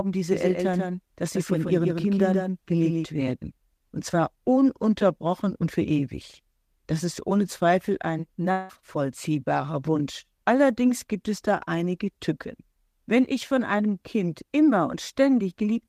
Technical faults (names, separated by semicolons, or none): doubled audio track; long network dropout